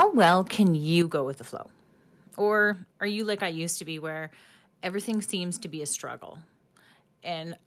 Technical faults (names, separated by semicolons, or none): microphone overload; microphone volume stepped down